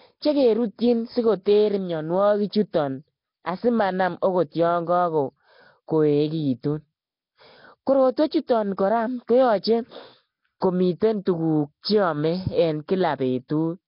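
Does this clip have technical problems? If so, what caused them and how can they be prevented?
Yes. The speech was likely passed through Nellymoser compression, Flash's low-rate microphone codec, which starves weak bands of bits and fills them with noise. The result is a rough, hissy, underwater sound throughout, with nothing above 5.3 kHz, which fits a stream of about 22 kbps. Recording or streaming with a modern codec at a higher bitrate would avoid this.

Pre-echo comes from the same block-based coding. Noise sized for a sharp attack spreads backwards into the quiet moment before it, so a brief hiss precedes and softens the onset at 8.47 to 8.49 s, at 10.60 s and at 11.25 s. A codec with short-block switching, or a higher bitrate, would prevent it.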